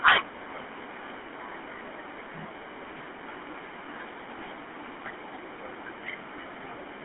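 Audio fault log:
Throughout, GSM full-rate codec: the speech carries a gravelly, buzzy roughness from a vocal-tract model excited by sparse regular pulses, consistent with the 13 kbps full-rate coder. Nothing passes above 3.8 kHz, and the band sits near 250 Hz to 3.4 kHz. The grit, not mere band-limiting, distinguishes it from a clean telephone line.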